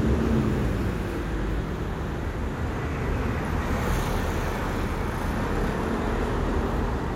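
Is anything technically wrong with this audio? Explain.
No, nothing technically wrong turns up here; these sounds come through without any faults to point to.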